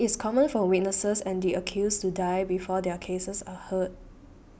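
No technical faults are audible anywhere in the speech recording.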